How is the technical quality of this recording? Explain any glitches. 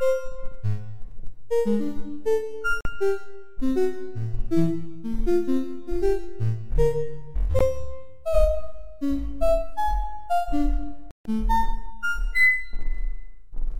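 The recording of sounds has three short silences. These are Bluetooth dropouts at 2.81 to 2.85 s (44 ms), 7.59 s (15 ms) and 11.11 to 11.26 s (145 ms). Audio packets likely arrived too late for the headphones and were discarded, so the output cut to silence. Each time, the sound resumes further along, as if it had kept playing. The gap lengths fit roughly three, one and ten lost packets.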